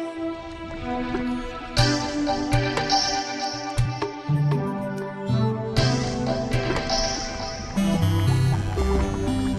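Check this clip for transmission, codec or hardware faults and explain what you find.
Nothing here points to a transmission, codec or hardware problem, so there's nothing to flag in this one.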